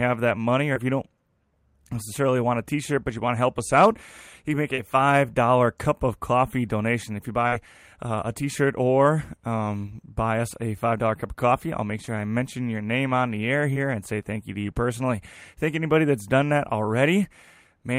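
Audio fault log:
0.73–0.78, 4.76–4.80, 7.48–7.54, 12.06–12.09 and 13.73–13.78 s: short concealed packet loss. About 20 ms went missing each time, 40 ms at 7.48 s. The receiver extended the preceding sound, causing brief smears.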